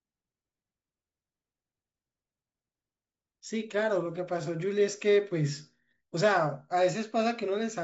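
No technical faults are audible.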